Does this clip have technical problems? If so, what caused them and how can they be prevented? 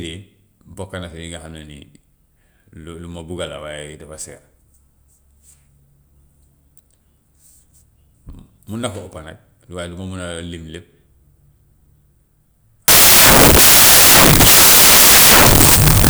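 Yes. From 12.88 s to the end at 16.1 s, samples built from the wrong bytes: misaligned byte assembly promotes fast low bits, turning the speech into loud, harsh broadband noise. Prevent it by verifying byte order and sample alignment against the file header before decoding.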